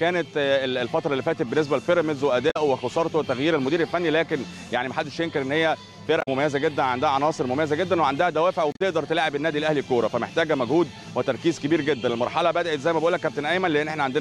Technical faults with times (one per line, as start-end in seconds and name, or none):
2.50-2.57 damaged data in a compressed stream
6.18-6.28 damaged data in a compressed stream
8.72-8.81 damaged data in a compressed stream